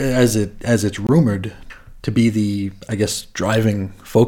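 A block of digital silence runs from 1.07 to 1.09 s, a 21 ms hole where the sound drops out, which fits a 1024-sample buffer left unfilled in time. The speech cuts out and back with no fade, leaving a short gap.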